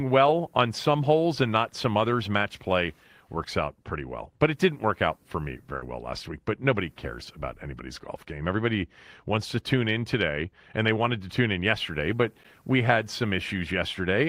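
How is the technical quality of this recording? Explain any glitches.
Two short glitches break into the speech.

At 5.76 to 5.83 s there is a burst of packet loss. The receiver filled about 60 ms by stretching the last sound and fading it, so a brief held buzz or dying hiss replaces the real audio. When playback resumes, roughly 60 ms of speech has been skipped. Unlike a silent dropout, the gap is filled with smeared sound rather than emptiness, and the speech jumps ahead afterwards.

At 12.43 s there is a block of digital silence lasting about 11.6 ms, which fits a 512-sample buffer that was not filled in time. The signal drops straight out and returns with no fade, and at this length the hole is heard as a tick or dip rather than as silence. This differs from packet loss: nothing fills the hole, and the sound cuts out and back abruptly.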